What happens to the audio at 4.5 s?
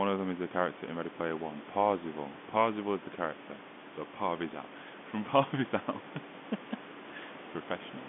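Nothing goes wrong at 4.5 s: the speech carries on intact through that moment, with the room noise about 16 dB below it and the narrow telephone band of the G.711 line unchanged.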